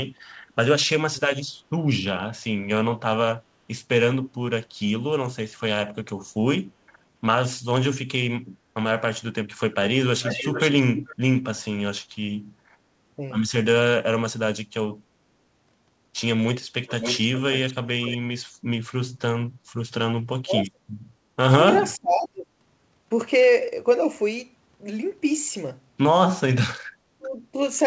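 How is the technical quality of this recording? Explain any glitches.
The recording has two recurring glitches: short dips in the speech level and two stretches of leaked echo. The audio is band-limited, with nothing above 8 kHz, which fits a G.722 call path at around 64 kbps.

Speech suppressed in double talk occurs at 0.98–1.43 s, 13.17–13.21 s, 20.45–20.81 s, 21.97–22.48 s and 27.18–27.57 s. The speech sinks sharply, by roughly 30 to 35 dB in the deepest cases, but only about 5 dB in the brief 13.2 s instance. The likely cause is an echo canceller that heard both sides at once and could not tell the talker from loudspeaker echo, so it turned everything down. Unlike a codec dropout, nothing is replaced; the speech is turned down and then returns.

Echo leak appears at 9.86–11.16 s and 16.87–18.18 s. A second copy of the speech trails the original by 438 ms and 569 ms respectively, sitting about 10 dB below it. 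This is likely loudspeaker sound picked up by a far-end microphone and only partly cancelled before being sent back. What separates it from room reverberation is that the copy is a distinct, delayed repeat rather than a smooth decaying tail, and it arrives much later than any room reflection would.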